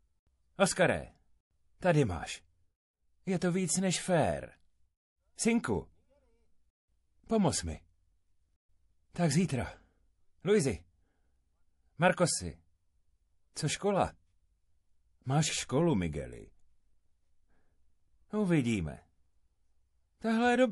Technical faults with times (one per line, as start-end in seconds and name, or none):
0.00-20.72 MP3 compression
3.39 pre-echo